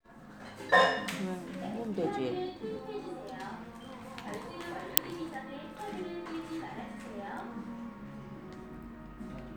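The clip is a recording of sounds with one fault. At 4.97 s there is an uninitialised buffer. A block of about 1.45 ms plays before any audio was written into it. Leftover memory is read out as if it were samples. The result is a loud crack that cuts across the sound. The tiny length fits a 64-sample block being played before it was filled.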